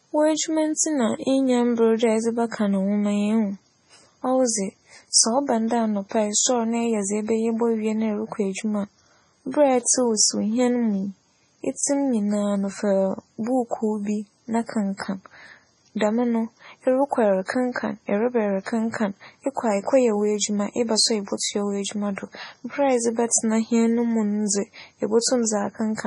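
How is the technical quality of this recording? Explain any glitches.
Heavy lossy-coding damage runs through the whole speech recording, and one short pre-echo appears near the end.

MP3 compression, throughout: the audio is likely MP3-encoded at a low rate, with the damage fitting a bitrate around 24 kbps. Starved of bits, the encoder discards everything above 10.5 kHz and drops quieter frequency lines that flicker in and out between frames. The result is dull, band-limited speech with a watery, swirling texture and metallic chirps on sibilants.

Pre-echo, 21.37 to 21.40 s, just after "w'edwuma eba so a": a sharp onset falls late in a coding block, so quantisation noise sized for that loud attack spreads back across the quiet 33 ms before it. A brief hiss leads into the attack, which sounds softened and smeared rather than crisp.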